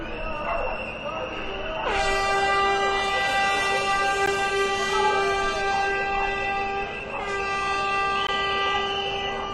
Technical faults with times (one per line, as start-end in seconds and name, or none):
4.26 gap between stream segments
8.27 gap between stream segments